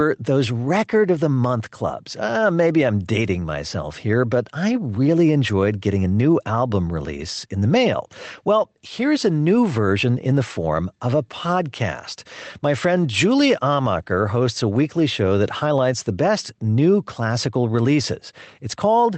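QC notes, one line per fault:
Throughout, gain pumping: the gain swings by about 5 dB, squeezing loud and soft parts together, likely from microphone gain set far too high with a fast limiter pulling it down.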